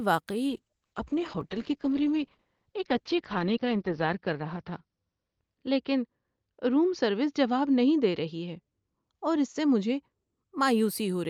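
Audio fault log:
0.51–10.58 s, call bitrate drop: The speech becomes coarse and watery, and its top end narrows from about 20 kHz down to about 6 kHz, which points to the encoder being pushed from roughly 48 kbps to around 8 kbps. At the bottom of the dip, held for about 3.5 s, the fewer bits leave smeared, grainy detail. On a spectrogram the energy above 6 kHz is sharply cut off with a flat ceiling. The waveform envelope changes little.
1.41 s, dropped buffer (overrun): A small forward jump in the sound, losing a few milliseconds with no gap of silence. This is likely an overrun, where incoming samples were overwritten before being read and the remaining audio was joined edge to edge. On the waveform it appears as a sudden step where the cycles break. On the spectrogram a thin vertical broadband line marks the splice.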